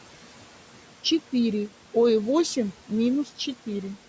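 Throughout the speech, noise suppressor artifacts are present. The suppressor estimates which frequency bands hold steady background noise and pulls them down frame by frame, here by about 12 dB. The room noise, sitting about 19 dB below the speech, drops away in the pauses and comes back up underneath the talking. The call microphone processing caps the band at 8 kHz.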